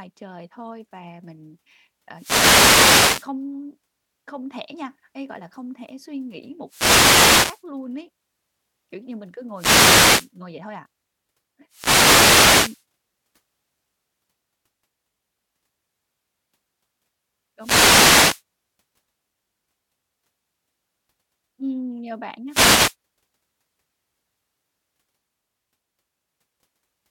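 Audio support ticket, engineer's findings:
Wireless microphone noise hit, analogue FM link: RF signal fading as multipath reflections cancel at the receiver, so the receiver's noise floor rises through the speech as bursts of static and swish. 2.14–3.32 s after "thôi và mình ờ"; 6.66–7.64 s, "không thể suy nghĩ" to "luôn ấy"; 9.54–10.31 s; 11.69–12.84 s; 17.59–18.43 s; 22.48–22.96 s after "nhờ bạn".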